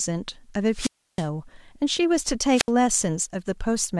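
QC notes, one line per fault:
0.72–1.27 s, wireless microphone squelch dropout: the FM link fades until the receiver's squelch mutes its output, so hiss rises briefly and the speech drops into near silence for about 0.32 s.
2.54–2.70 s, wireless microphone squelch dropout: a shorter fade trips the squelch again, giving a short burst of static and a 71 ms gap of near silence before the speech returns.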